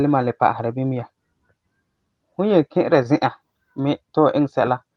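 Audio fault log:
No faults found; the speech has the band-limited sound of a call path, its top end rolling off in a way that fits Opus at around 24 kbps with a 12 kHz audio bandwidth.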